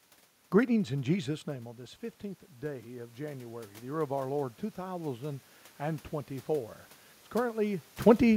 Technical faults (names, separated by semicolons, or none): automatic gain rising